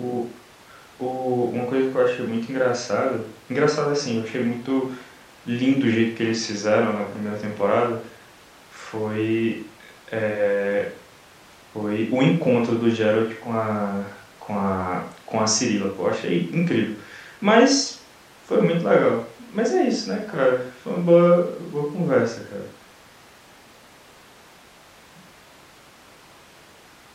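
No technical faults are audible.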